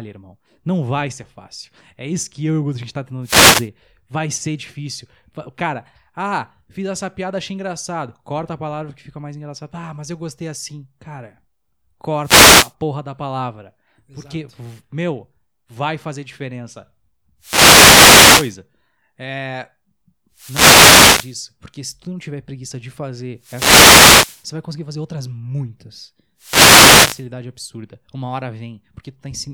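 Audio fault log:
3.22–3.69 s, 12.22–12.73 s (just before "porra da palavra"), 17.39–18.57 s (after "meu vai fazer diferença"), 20.33–21.39 s, 23.39–24.46 s, 26.38–27.26 s (after "conseguir fazer outras muitas"), wireless microphone noise hits: the FM radio link fades as reflected paths cancel, letting receiver hiss rise and, in a deep fade, clicks swamp the speech. Each shows as a broadband vertical smear on the spectrogram and a fuzzy burst in the waveform.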